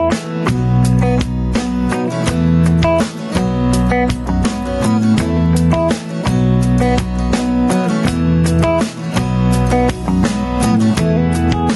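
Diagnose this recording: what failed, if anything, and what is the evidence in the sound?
Gain pumping runs throughout: the gain swings by around 10 dB, squashing loud and soft parts together. The likely cause is analogue input gain set too high, with a fast limiter clamping each peak.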